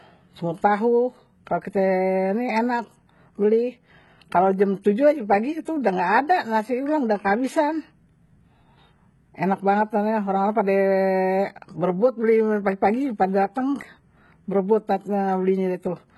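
Throughout the speech, the treble stops at about 11.8 kHz and sounds synthetic. S sounds turn gritty and lispy. This is likely heavy HE-AAC compression at a very low bitrate.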